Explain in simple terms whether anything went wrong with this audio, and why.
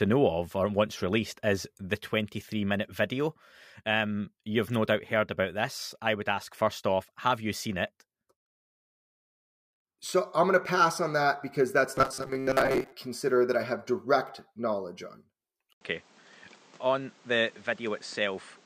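Two things go wrong, both in the later part of the speech.

From 11.95 to 12.92 s the voice turns into a rigid, metallic buzz pitched at about 133 Hz. This is robotic sound from repeated short buffers. Fresh audio is arriving too slowly, so the playback keeps looping a tiny slice, about 7.5 ms long, and most of the real audio in that stretch is skipped. The loop length sets the buzz pitch. A stalled audio stream is the likely cause.

At 15.73 s there is a short gap, about 80 ms, and from then to the end the sound is duller, somewhat quieter, and carries a faint new background noise. This fits an input switched to a poorer device, likely a different microphone or a headset's call mode, which passes a narrower range of frequencies and brings its own tone and noise.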